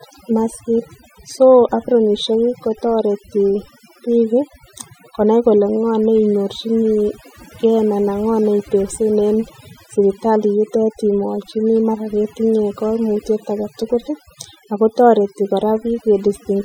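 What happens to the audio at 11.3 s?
At 11.3 s the speech is still under overdone noise removal, which runs through the whole clip. A noise reducer set far too hard keeps muting individual frequency bands that sit near its noise estimate, taking quiet speech detail with them. The background drops and breaks up into twinkling specks.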